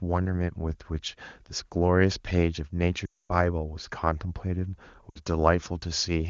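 At 3.05 to 3.37 s, then 5.10 to 5.20 s, lost AMR speech frames hit the speech. The decoder repeats the last good pitch with falling gain: the first run drops to near silence within two frames, and the second also drops to near silence. Spectrograms show frozen, fading harmonics; waveforms taper.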